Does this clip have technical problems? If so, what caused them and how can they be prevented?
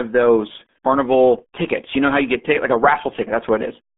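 Yes. The whole clip carries RealAudio 14.4 codec damage: the speech sits in a narrow band of roughly 200 Hz to 3.5 kHz with nothing above 3.7 kHz, and it sounds muffled and gargly, which fits the heavy quantisation of an 8 kbit/s dial-up-era stream. To prevent it, work from the original recording or re-encode with a modern wideband codec at a decent bitrate.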